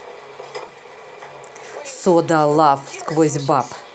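At about 0.67 s the speech briefly smears and wobbles for roughly 20 ms before settling back by 0.71 s. This is short concealed packet loss: a packet arrived too late, so the receiver extended the preceding sound to cover the gap, then crossfaded into the real audio.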